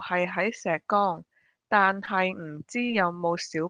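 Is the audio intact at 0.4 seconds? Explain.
Yes, the speech at 0.4 s is intact, with no fault at that moment.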